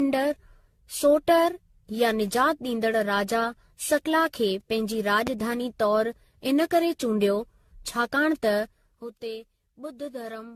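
From the start the speech sounds swirly, smeared and hollow, with blurred attacks and nothing above 14 kHz. This is generation loss, likely from repeated lossy re-encoding, something like fifteen passes at a setting that fits 64 kbit/s AAC-LC, each adding fresh quantisation noise.

From 5.27 to 5.30 s, just after "सकला खे पंहिंजी", a single loud pop about 15 dB above the speech cuts in sharply while the speech carries on underneath. It was likely a brief voltage spike, from a plug, switch, static discharge or driver glitch, added to the signal.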